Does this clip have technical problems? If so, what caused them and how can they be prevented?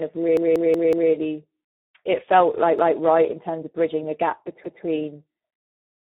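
Yes. The speech sounds hoarse and noisy, and it is confined to a narrow band with nothing above about 3.8 kHz. That points to the Speex codec at a low setting, around 8 kbps. Using a higher Speex quality setting or a wideband codec would prevent this.

There are also repeated buffer stutters, where one chunk of about 186 ms plays again with a hard join. From 0.37 to 1.12 s it repeats four extra times. It repeats once from 2.79 to 2.97 s, after "it felt like" and before "right in terms of", and once from 4.64 to 4.83 s, after "of bridging the gap". The device replayed its last buffer, which fits an 8192-sample buffer, because new audio arrived late. A larger playback queue or steadier audio delivery would prevent these repeats.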